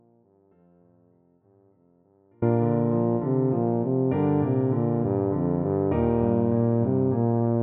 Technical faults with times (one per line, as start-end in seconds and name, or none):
0.00-2.42 audio dropout to a faint residue